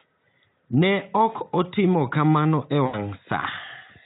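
A speech recording with VoIP packet loss concealed by the speech codec from 2.85 to 2.98 s, just after "ok otimo kamano e". Roughly 80 ms of audio went missing, which fits about four 20 ms frames, and the decoder filled the gap by repeating its last pitch and spectral shape at falling gain. This is heard as a brief stretched sound that fades. On a spectrogram, the harmonics freeze into flat, evenly spaced horizontal lines that dim across the gap. The waveform shows a repetitive, shrinking periodic pattern, and the level recovers slowly as the decoder rebuilds its state. The surrounding audio carries the faint coloration of the Speex codec at about 18 kbps.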